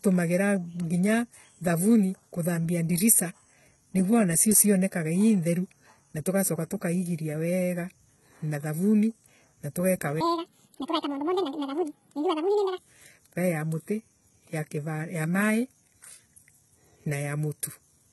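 Throughout the speech, the treble sounds gritty and lispy, with s sounds smeared and metallic: HE-AAC compression, likely at a very low bitrate near 16 kbps. The upper band is rebuilt from copied lower bands, and a spectrogram shows blocky, repeated texture cut off above 11.8 kHz.

From 10.21 to 12.78 s, between "na thavuni na tugeka" and "vaii ya muti", a section at the wrong speed plays 1.86 times too fast, likely from a wrong clock, so the speech turns high and hurried, around ten semitones up. A spectrogram shows harmonics stretched upward, and the waveform is compressed in time.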